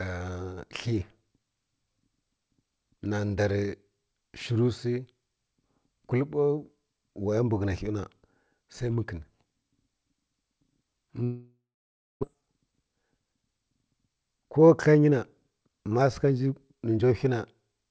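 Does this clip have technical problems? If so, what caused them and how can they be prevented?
Yes. At 11.24 s there is a long network dropout that lasts until 12.25 s. The last sound is stretched into a fading buzz, then about 0.59 s of silence follows. When the speech resumes, roughly 0.6 s of it is simply gone. The likely cause is a burst of packets that never arrived in time, with the receiver's delay jumping by around four tenths of a second. A more stable connection, such as wired rather than congested wireless, helps prevent this.

From 12.35 s to 16.25 s there is a jitter buffer speed-up. The late packets arrived together, so the buffer held too much audio. To catch up, the receiver cut many tiny pitch-period slices, around four tenths of a second in total. The speech runs about 9% fast at unchanged pitch and sounds hurried. The call went over a G.722 link, which carries nothing above 8 kHz. 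Reducing network jitter keeps the buffer near its target, so no catch-up is needed.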